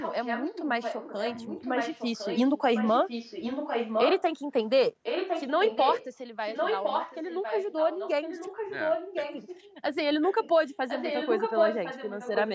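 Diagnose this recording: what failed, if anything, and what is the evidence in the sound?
Echo leak, call-processing stage: a copy of the speech trails by 1.06 s at 0–4.22, 5.03–6.06, 6.5–9.64, 10.21–10.5 and 10.67–12.51 s. It sits just below the direct level, and much fainter at 10.21 s. The likely cause is far-end loudspeaker pickup that the echo canceller left in.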